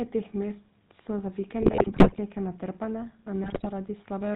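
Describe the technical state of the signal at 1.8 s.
At 1.8 s the signal sits inside a burst of GSM bit errors running from 1.62 to 2.19 s, just after "so za". Flipped bits corrupt the decoder's filter, pitch and gain parameters, so each affected 20 ms frame is rebuilt with a bent spectrum or a jumped level. The span fits roughly 28 damaged frames and a badly failing link. It is heard as squawks, pops and gargling. On a waveform, level spikes and collapses change abruptly at frame boundaries. A spectrogram shows blocky, smeared formants and bright broadband flares.

Underneath, the whole clip carries GSM full-rate codec damage, consistent with the 13 kbps coder. The vocal tract is modelled and driven by a regular pulse excitation that keeps only every third sample. The result is a plainly audible buzzy, gravelly roughness. A spectrogram shows nothing above 4 kHz and harmonics with a coarse, grainy texture rather than clean striations.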